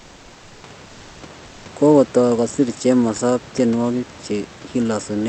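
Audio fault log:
0.00–0.63 s, comfort noise in place of the background: the opening background turns into a steady, featureless hiss about 2 dB quieter, likely synthesised while transmission paused during silence.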